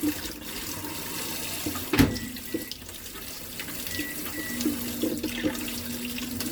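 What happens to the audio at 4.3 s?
Generation loss is present at 4.3 s, as it is across the whole clip rather than starting there. The audio has likely been through around ten rounds of lossy MP3 decoding and re-encoding. Each pass re-quantised it on a shifted frame grid, so the noise and spectral gaps piled up. The sound is swirly, smeared and hollow, with softened attacks, more damaged than a single encode at 128 kbit/s would leave. Nothing reaches above 19.9 kHz.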